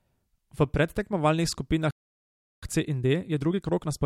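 At 1.91 s the speech stops dead in mid-flow. It stays silent for about 0.72 s, until 2.63 s. This is a playback stall. The player was likely starved of data or its thread was blocked, so output simply halted until it recovered.

From 2.63 s to the end, a time-compressed catch-up follows. The player trims its backlog by removing short slices and cross-fading the joins. Speech runs about 1.15 times faster at unchanged pitch. It sounds hurried.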